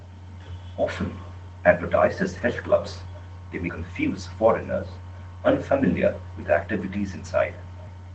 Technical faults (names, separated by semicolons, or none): echo with no canceller; lost packet rebuilt from error correction